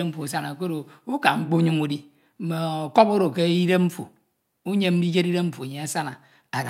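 No technical faults can be heard anywhere in this speech recording. Nothing in the sound points to anything having gone wrong along the way.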